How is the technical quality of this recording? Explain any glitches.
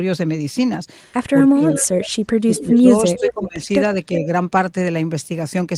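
The call has two echo-canceller problems in the middle of the clip.

From 1.8 to 2.86 s, and again from 3.17 to 3.6 s, there is speech suppressed in double talk. The canceller, likely confused by both sides speaking at once, turned the near talker down along with the echo. The voice dips or drops out in pieces, by as much as about 30 dB in the first stretch and about 20 dB in the second.

From 2.56 to 2.98 s and from 3.17 to 3.45 s there is echo leak. A loudspeaker echo was likely not fully cancelled and was sent back. A copy of the voice trails it by 375 ms, at about 15 dB below the speech the first time and about 10 dB below the second.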